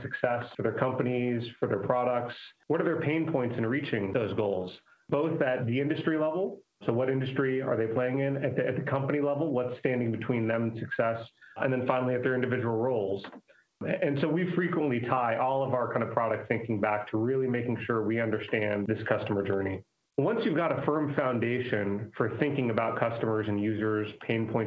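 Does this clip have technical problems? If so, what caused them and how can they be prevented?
No, this clip has no technical problems.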